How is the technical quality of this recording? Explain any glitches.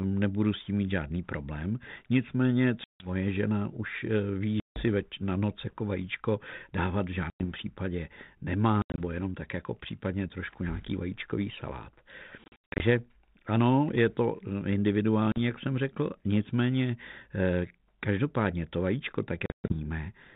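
The speech has repeated dropouts from packet loss on an ADPCM call, carried over a telephone-band line whose light coding noise fits G.726 at 32 kbit/s.

Gaps fall at 2.84, 4.6, 7.3, 8.82, 12.44, 15.32 and 19.46 s, with 40 to 240 ms missing each time. The losses at 8.82, 12.44 and 19.46 s are scattered runs spread over up to 360 ms. Lost data becomes silence, and the decoder's predictor and step size drift from the sender's. Each hard-edged hole therefore ends in slightly distorted speech that settles within tens of milliseconds.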